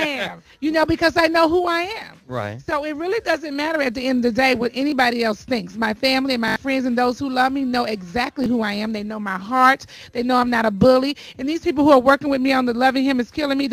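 At 4.90 to 4.92 s, a repeated buffer occurs. Fresh audio failed to arrive in time, so the last block played once more. The repeat lasts about 20 ms, which fits a 20 ms buffer, and the hard join gives a brief click. From 6.48 to 6.56 s, the same block plays four extra times. That is heard as a short buzzing stutter, and about 70 ms of sound goes missing. At 8.44 to 8.46 s, a single repeat clicks again.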